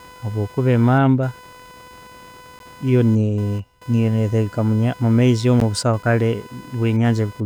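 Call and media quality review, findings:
Computer activity noise, throughout. Buzzy, pulsing hum near 500 Hz, well below the speech. Ground path from host activity. Processor, graphics or mouse load shifts the shared ground under the audio circuit. It is not mains hum: the rate sits well above 50 or 60 Hz, and the noise tracks machine load, not the talker.

Gap between chunks, at 2.59 s and 5.60 s. Two 12 ms holes, spaced 3.0 s apart. Chunked transport or player, with padding or a late start at each join. It differs from packet loss because the spacing is regular and nothing is missing: the speech resumes exactly where it stopped.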